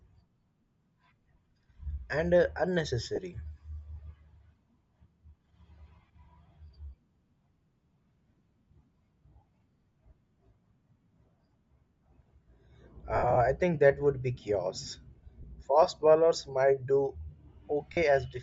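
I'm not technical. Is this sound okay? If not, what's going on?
No. The whole recording has a breathy, grainy edge on the speech, with the high end replaced by a kind of hiss. That is likely Bluetooth LC3 compression, the squeezing a wireless earbud or headset link applies to save data.

There are also short lost LE Audio frames: brief gaps where pieces of the wireless signal never arrived and the decoder papered over them with a noisy smear. They occur at 3.16–3.18, 8.38–8.41, 15.42–15.44 and 17.93–17.97 s. The worst is a patchy stretch from 13.16 to 13.37 s.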